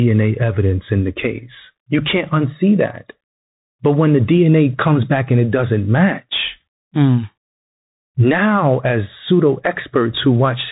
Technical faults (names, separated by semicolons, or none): Bluetooth CVSD headset codec